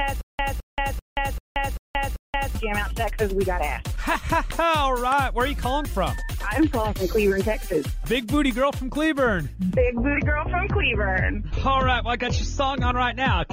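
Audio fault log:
0.00–2.55 s, stutter with silent gaps: already under way as the clip opens, a 212 ms burst repeats six times, once every 390 ms, each followed by about 178 ms of digital silence. A stalled player likely replayed its last fragment at every retry, losing the audio between.
9.81–13.52 s, adaptive stream at a lower bitrate: the treble suddenly vanishes above 6.9 kHz and codec artefacts grow, with no gap at the switch. The stream changed to a leaner version, which fits a step from about 96 kbit/s AAC down to 24 kbit/s.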